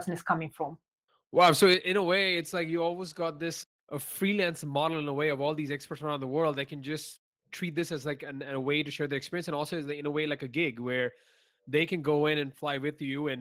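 A speech recording with two linked faults early on. From 1.40 to 1.74 s the loudest moments take on a flattened, crackling distortion, with about 3 percent of the samples in that stretch squared off, roughly 4 dB beyond what the converter could hold. This is most likely microphone overload: the input volume was set too high, so the peak tops were cut off at the converter. Because the distortion sits only on the loudest peaks instead of smearing the whole signal, it is clipping rather than codec breakup. At 1.75 s, just before "a way it's like", the voice and the background together drop by about 5 dB in a single step. That points to the microphone volume being stepped down, as call software does when it detects a clipping or overly loud input and cuts the device gain. A fading automatic gain control would ease the level down gradually. This change is abrupt, hits everything in the signal equally, and comes right on the heels of the distorted stretch.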